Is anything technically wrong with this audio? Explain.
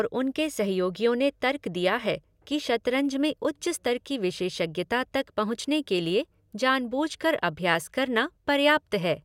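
No, the signal shows no technical faults anywhere in the recording.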